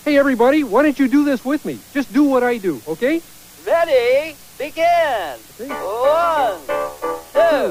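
A constant, even hiss runs through the whole clip. It comes from low bit depth with dither. Dither randomizes the rounding error, turning distortion into steady white noise. The noise floor sits only about 25 dB below the signal, which fits roughly 7 bits.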